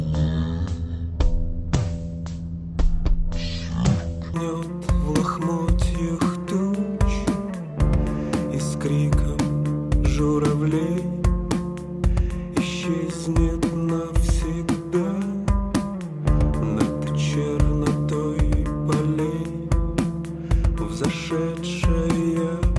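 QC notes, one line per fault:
0.00–4.34 s, wrong sample rate: sound runs at half speed, a full octave low, which fits 48 kHz material being played back at 24 kHz.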